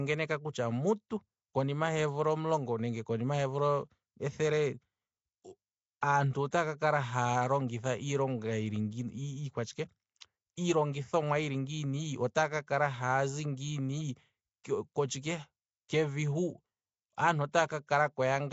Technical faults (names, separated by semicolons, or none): Nellymoser compression; pre-echo